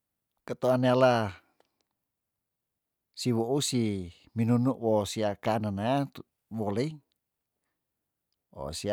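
Speech recording with no technical faults audible anywhere.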